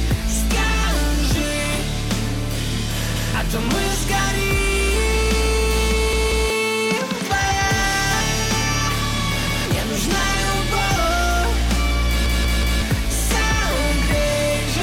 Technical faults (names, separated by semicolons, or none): repeated buffer